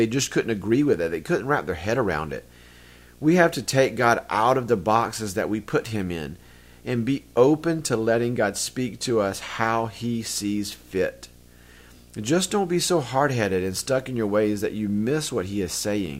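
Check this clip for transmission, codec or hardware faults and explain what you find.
One hardware fault is present. Video or display buzz runs throughout the speech: a screen or video cable couples into the audio, giving a 60 Hz field-rate buzz with hash, around 30 dB below the speech, seen as steady harmonic lines on a spectrogram.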